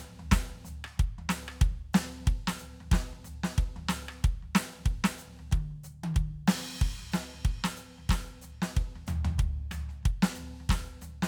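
No faults can be heard anywhere in this music clip. Nothing along its path breaks in or interrupts the sound.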